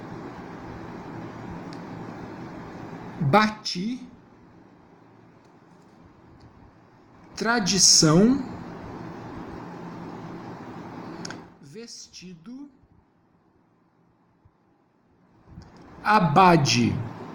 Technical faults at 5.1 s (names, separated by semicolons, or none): none